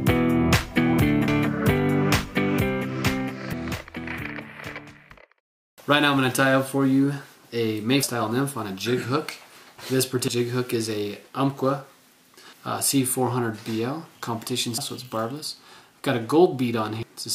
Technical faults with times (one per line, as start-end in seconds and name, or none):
1.28 audio missing between chunks
3.53 audio missing between chunks
5.78 audio missing between chunks
8.03 audio missing between chunks
10.28 audio missing between chunks
14.78 audio missing between chunks
17.03 audio missing between chunks